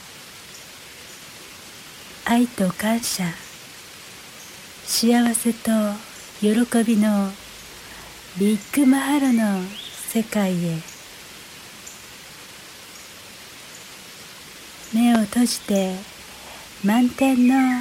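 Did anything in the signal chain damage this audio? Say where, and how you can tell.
Yes. A loud pop at 5.26 to 5.29 s and another at 15.15 to 15.18 s, each a single sharp thump about 15 dB above the audio, which continues beneath. This is likely an analogue wiring fault, a voltage step from a connector or switch added to the signal.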